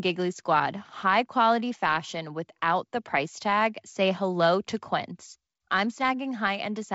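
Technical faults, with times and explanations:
No technical faults can be heard in this speech clip.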